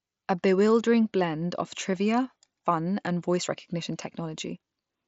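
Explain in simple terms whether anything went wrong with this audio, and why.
Concealed Bluetooth headset packet loss at about 1.93 s, right after "bewildering blend of". One tiny piece of audio, about 7.5 ms, never reached the phone over the headset's wideband mSBC link, so the phone filled the gap by repeating a closely matching snippet of the sound just before it, making the glitch barely noticeable.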